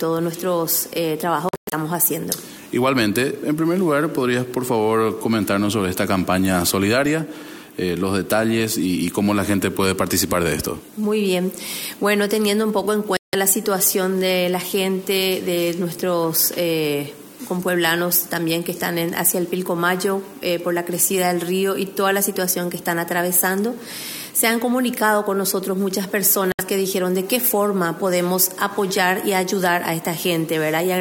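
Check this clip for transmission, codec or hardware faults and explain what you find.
There are three short gaps of silence, at 1.49 to 1.74 s, 13.17 to 13.35 s and 26.52 to 26.61 s. The first is broken into several holes. These are likely Bluetooth dropouts. Late packets were discarded, so the sound cuts out and resumes further along, as if it had kept playing.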